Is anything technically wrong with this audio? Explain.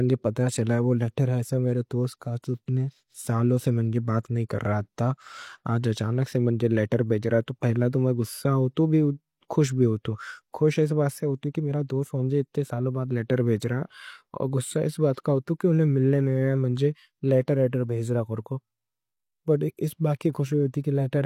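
Yes. There is one fault: pre-echo at 20.33 to 20.35 s, near the end of the speech. A transform codec spread its quantisation noise evenly across a coding block. A sharp attack sat late in that block, so noise sized for the loud onset also filled the quiet moment before it. It smears about 20 ms ahead of the attack. You hear a brief hiss just before the onset, and the attack itself sounds softened and blurred rather than crisp.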